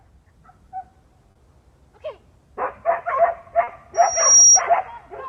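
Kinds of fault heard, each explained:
Short concealed packet loss: At 1.31 s and again at 3.63 s, about 40 ms of audio failed to reach the decoder in time. The receiver covered each gap by continuing the preceding sound and then blending back into the real signal, so each spot is heard as a brief smear or wobble. On a spectrogram the existing bands stretch flatly across the hole with a faint seam at each join. The waveform looks oddly repetitive for that stretch.
Loudspeaker feedback squeal: From about 3.94 s to 4.62 s, a microphone is picking up the loudspeaker it feeds. At 5.7 kHz the loop gain exceeds one, so that tone keeps reinforcing itself. It builds over roughly 0.4 s into a piercing whistle about 10 dB above the rest of the audio. A spectrogram shows a single bright horizontal line at 5.7 kHz that grows stronger as it rises. The waveform envelope swells steadily while the squeal grows.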